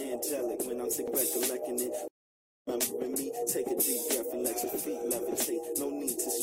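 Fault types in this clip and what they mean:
Stream reconnect: The connection dropped and the player fell silent, then reconnected and started a new decoder partway through the stream. Here the audio cuts out at 2.08 s. About 0.59 s of silence follows. Sound returns at 2.68 s, but not where it stopped. It picks up roughly half a second further on, so that stretch is simply missing. The first moments after the restart come in muted or faded up.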